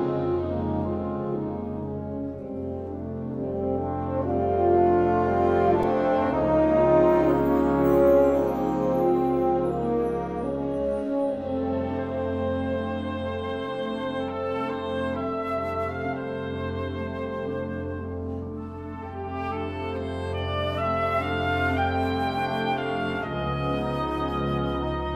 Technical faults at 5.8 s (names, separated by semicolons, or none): repeated buffer